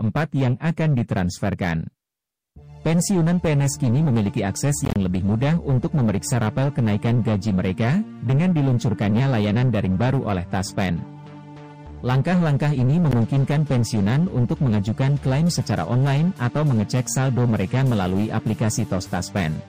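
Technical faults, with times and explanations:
4.85–4.96 s and 13.11 s, Bluetooth dropout: audio packets likely failed to reach the headphones in time and were discarded. The first leaves about 67 ms of scattered silent gaps across 107 ms, with the longest lasting 27 ms, consistent with roughly five lost packets. The second is a single 13 ms hole. Each gap cuts out abruptly or with a fade of a few milliseconds, and the sound resumes as though it had kept playing.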